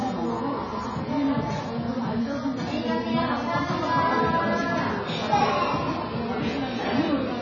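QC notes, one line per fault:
Throughout, AAC compression: the sound is dull and smeared, with nothing above 7 kHz, and sustained or hissy parts take on a warbling, fizzy texture. This is likely heavy AAC-LC encoding. At such a low rate the encoder lowers its cut-off and quantises the remaining frequency lines coarsely against its hearing model, so weak bands drop out and what is left shimmers from frame to frame. The damage points to a bitrate around 16 kbps.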